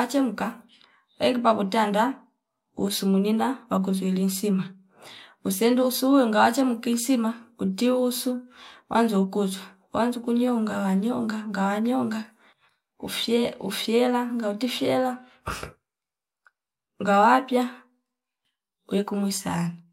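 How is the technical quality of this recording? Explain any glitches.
Nothing stood out on listening; no glitches were heard at any point in the recording.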